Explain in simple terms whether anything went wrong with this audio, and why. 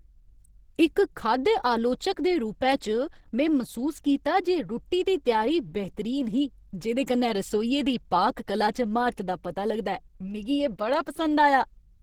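Something did go wrong: the speech carries plainly audible Opus compression damage throughout. It sounds hoarse, rough and grainy, likely because the encoder was short of data and switched to its hybrid speech mode, filling in missing detail with noise.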